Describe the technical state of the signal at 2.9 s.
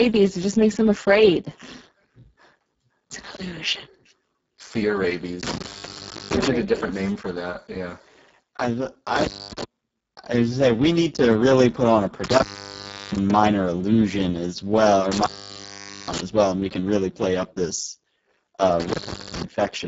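At 2.9 s the speech is passing through a Speex codec at a very low quality setting, as it does for the whole clip. With so few bits left for the excitation signal, the CELP coder can only approximate the voice's buzz and breath, so the speech sounds hoarse, noisy and edging toward robotic, which fits a setting of about 5.8 kbps. Nothing is present above 7.7 kHz, and the upper band sounds like shaped noise rather than real detail.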